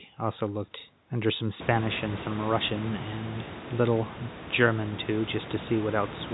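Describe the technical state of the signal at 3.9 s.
At 3.9 s the signal is intact, with no fault present at that moment.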